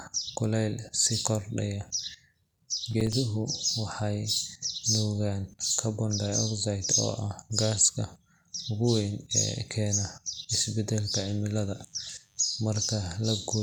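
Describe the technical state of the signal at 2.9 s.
A brief burst of gritty crackle tears through the speech from 2.91 to 3.13 s: processor overload crackle. The processor repeatedly missed its deadlines for small audio buffers of around 5 ms, and a handful of those slots dropped to silence, leaving hard-edged gaps.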